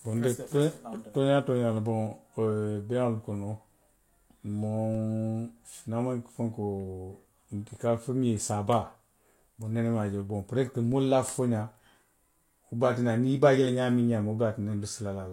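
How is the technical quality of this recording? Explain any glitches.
The recording has two glitches, both DC steps. At 4.95 s and 10.92 s, the waveform's zero line suddenly jumps. The offset then fades away as a high-pass around 20 Hz drains it. Each jump sounds like a brief low thump under the speech.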